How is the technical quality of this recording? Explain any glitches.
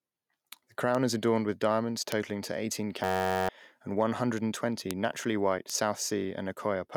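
The recording has two kinds of technical fault: scattered bit error spikes and one system hang loop.

At 0.95, 2.12, 4.91 and 5.70 s, a flipped bit corrupts two or three samples. Each bit error spike is a single sharp broadband tick, unrelated to the speech.

From 3.04 to 3.49 s, the system freezes while the hardware keeps replaying one 10.67 ms buffer, which fits a 512-sample buffer. This system hang loop is a steady buzz near 94 Hz, and about half a second of audio is lost.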